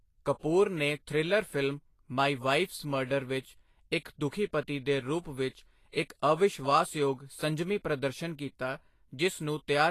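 Throughout the speech, the treble sounds hissy and grainy, and nothing is present above 14.2 kHz. This is likely Vorbis compression at a low rate, around 34 kbps. On a spectrogram, the top is cut flat and the upper bands look speckled.

At 0.39–0.43 s, 5.49–5.55 s and 5.89–5.94 s, a short hiss of 43, 59 and 51 ms comes before each attack. This pre-echo shows as a noise smear ahead of each onset on the waveform and spectrogram.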